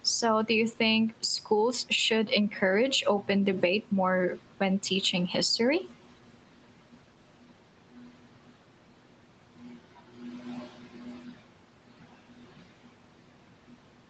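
No technical faults are audible.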